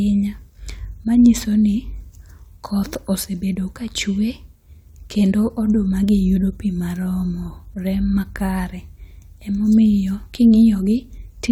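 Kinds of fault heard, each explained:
No technical faults detected.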